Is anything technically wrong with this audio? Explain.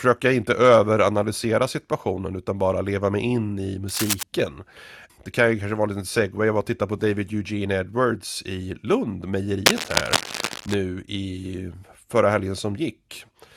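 Yes. Two bursts of cable scratch noise cross the speech: 3.88 to 4.24 s, just after "leva mig in i", at about 5 dB below the signal, and 9.66 to 10.74 s, at about the signal's level. Each is dense, uneven scratching, likely from a worn cable or connector whose contact resistance fluctuated as it moved.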